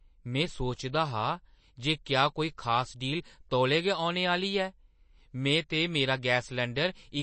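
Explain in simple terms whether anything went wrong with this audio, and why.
Something did go wrong, and it runs through the whole recording from start to finish. The speech has that watery, swirly quality you get from heavy MP3 compression, which is likely the cause here. The encoder ran short of data, so it chopped off everything above about 8.3 kHz, making the sound dull, and it dropped quiet detail that flickers in and out, which is why s sounds come out chirpy and smeared.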